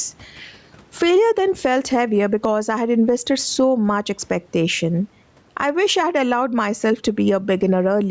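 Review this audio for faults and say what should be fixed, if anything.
Gain pumping runs through the whole recording, with a swing of roughly 10 dB. The likely cause is input gain set far too high, with a fast limiter or compressor clamping down on each loud syllable. On a waveform the speech peaks look flattened to one ceiling. On a spectrogram the noise floor brightens between phrases and darkens under them. Lowering the microphone gain so the limiter rarely engages would prevent it.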